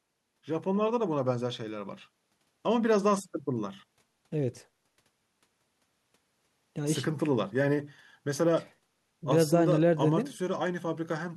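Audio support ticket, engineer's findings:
Listened through the speech recording and found nothing to flag, so there's no fault to chase on this one.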